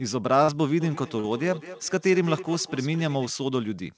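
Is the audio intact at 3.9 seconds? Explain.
Yes, the audio is intact at 3.9 seconds, with nothing breaking up or distorting the sound at that point.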